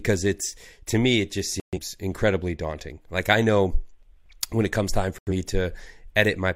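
Digital broadcast dropout interrupts the speech twice. From 1.60 to 1.78 s, right after "to me it just", the sound mutes abruptly and resumes at "incredibly daunting". At 5.18 to 5.32 s, after "when it comes time", a second hole follows. The receiver lost frames and muted until good ones returned, which fits about three and then two corrupted frames. The waveform drops to silence, and the spectrogram shows clean, full-height vertical gaps.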